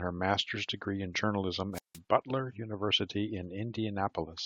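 At 1.73 s the speech hits a wireless microphone squelch dropout lasting until 1.98 s. The radio signal fades. Hiss rises briefly. Then the receiver's squelch mutes the output for about 164 ms, leaving near silence. The speech returns at 1.98 s.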